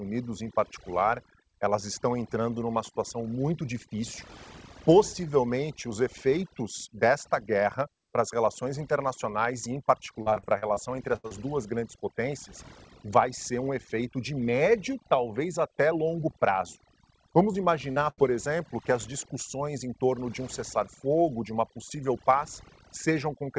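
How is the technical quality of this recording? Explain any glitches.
The recording is hampered by heavy-handed noise reduction across the whole clip and by several stretches of packet loss. The audio sits in a band that stops at 8 kHz, which fits a wideband call codec such as G.722.

Throughout, the background drops and breaks up into twinkling specks. That is overdone noise removal. The suppressor was set so aggressively that any frequency band close to its noise estimate gets pushed down or switched off. Quieter parts of the voice fall below that line too, so they are carved away along with the hiss, and the isolated bands that survive produce the sparkling residue.

From 10.22 to 10.78 s the voice turns choppy, with pieces dropping out. This is repeated packet loss with a robotic sound. There are six separate holes in about half a second, the longest around 39 ms. Each one is patched by extending the sound just before it, and together the patches make up roughly 29% of that stretch. 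Because the repairs follow one another so closely, the voice takes on a choppy, stuttering quality.

At 11.16 to 11.26 s and again at 18.10 to 18.20 s, the sound freezes into a brief held buzz or fading hiss, then jumps ahead. Each of these is a burst of packet loss, with about 80 ms of audio missing each time. The receiver kept extending the last sound and let it die away across the gap. When playback resumed, the stretch in between was simply gone.

Brief smears occur at 11.28 to 11.32 s, 17.52 to 17.56 s and 17.92 to 17.98 s. These are short concealed packet loss, with 20 to 40 ms of audio arriving too late each time. The decoder bridged each hole by continuing the preceding sound, pitched if it was voiced and as shaped noise if not, then blended back into the real signal. The result is a momentary wobble, and a short consonant can disappear in the process.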